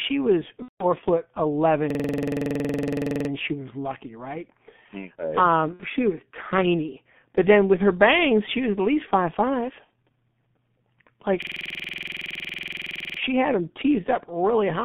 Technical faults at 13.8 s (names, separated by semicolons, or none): G.723.1 codec